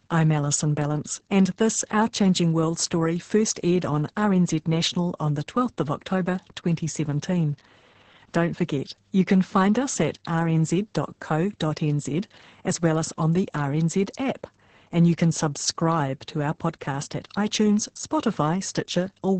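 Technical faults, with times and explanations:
Throughout, Opus voice compression: nothing above about 8.6 kHz, so the speech has that wideband, muffled feel, and it's noticeably hoarse and a bit robotic too. That's heavy codec damage. It sounds like Opus running its SILK linear-prediction coder at a very low rate, which fits something around 10 kbps. At that rate the excitation signal gets coded so coarsely that the natural breathiness turns gritty and buzzy, and the encoder trims the band to save bits.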